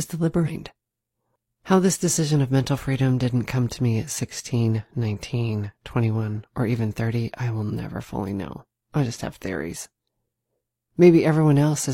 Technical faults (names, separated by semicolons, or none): damaged data in a compressed stream